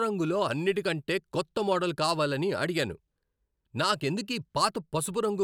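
No technical faults can be heard anywhere in this speech recording.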